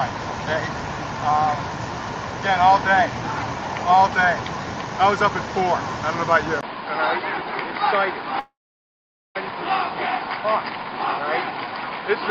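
Input switched to a poorer device, at 6.61 s: after a 20 ms gap, the sound turns dull and boxy for the rest of the clip, with nothing above 5 kHz, a level drop of roughly 5 dB, and a new noise floor around 30 dB down, likely from a switch to another microphone or headset.

Long network dropout, from 8.39 to 9.37 s: roughly a second of audio, likely lost in transit, never arrives. The receiver extends the last sound briefly as a fading buzz, then about 0.83 s of silence follows before the audio resumes without the missing part.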